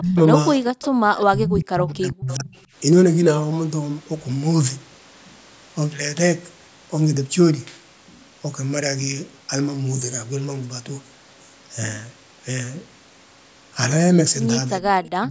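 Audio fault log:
0.00–0.17, 1.26–2.50 and 15.09–15.31 s, speech suppressed in double talk: the echo canceller, faced with both sides talking at once, likely could not tell the near talker from the loudspeaker echo and pulled the whole microphone signal down. The speech sinks by roughly 30 to 40 dB, dipping or breaking up for a brief stretch at the start, for around a second from 1.26 s, and for the final fifth of a second.
0.81–0.87, 1.17–1.24, 2.28–2.35 and 15.05–15.09 s, echo leak: residual loudspeaker pickup likely slipped past the echo canceller and was returned. Each time a faint copy of the speech arrives 410 ms late, short and scrappy. It sits about 20 dB under the main voice in the first three, and about 30 dB under it just before the end.
0.89–0.98 s, background gated by the echo canceller: while the loudspeaker was active, the canceller clamped the microphone hard, cutting the level by about 37 dB for about a tenth of a second. 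The room sound briefly vanishes, leaving a short hole of near silence, then returns as the canceller releases.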